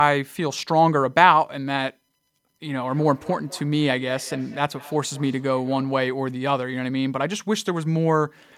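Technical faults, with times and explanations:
2.82 to 6.24 s, feedback echo between two devices: a second device in the room is playing back this microphone's signal, and the microphone picks that playback up again. Its echo canceller only removes what its own device plays, so the returning sound passes through untouched. Each stretch of speech comes back roughly a fifth of a second later, at a steady interval, peaking about 20 dB below the direct speech as a faint trailing repeat.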